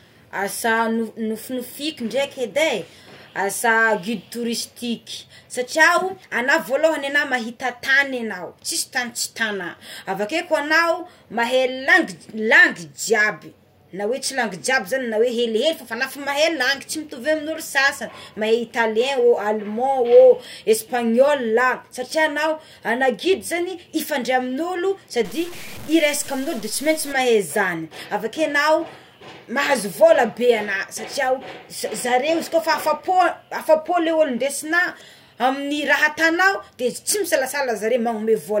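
From 25.25 to 27.12 s, after "ifandray amign'olo" and before "mahay izany avakeo enao", the speech turns grainy and gritty, the distortion tracking the sound and sitting roughly 20 dB below it. This is likely low bit depth without dither, truncated to something like 6 bits.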